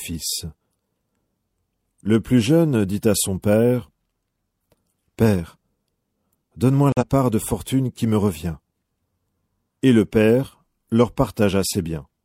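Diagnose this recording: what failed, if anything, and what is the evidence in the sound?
Corrupt frame muted, from 6.92 to 7.03 s: the speech drops abruptly into complete silence for about 116 ms, then resumes on "part de fortune qui". This failure sits at the codec stage. Damaged bits in the compressed stream made the decoder reject the affected frames, and the player substituted silence rather than guessing at the missing audio. The gap's length points to roughly two consecutive frames being lost. Timing is preserved, with no shift afterwards.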